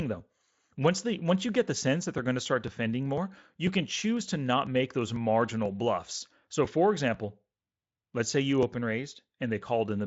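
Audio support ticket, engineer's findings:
Periodic USB or driver dropouts: regular ticks on speech from 0.20 s to 9.62 s, one every 0.496 s, around twenty. USB bus or driver stalls skip a few milliseconds each time, with no silence inserted. Waveform shows abrupt splice steps. Spectrogram shows evenly spaced thin vertical broadband lines, reaching the 7.7 kHz Speex band edge.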